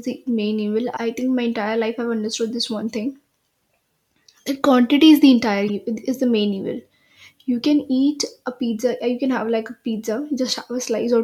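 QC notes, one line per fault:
0.93–0.98 s and 5.68–5.70 s, damaged data in a compressed stream: a short stretch of the encoded speech arrives corrupted, so the decoder cannot parse those frames, drops sync and hunts for the next valid frame header before output resumes. Each spot is heard as a brief chirp or blip cutting into the speech, about 50 ms long at the first point and closer to 20 ms at the second.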